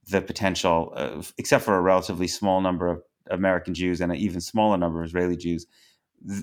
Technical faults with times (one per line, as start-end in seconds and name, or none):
none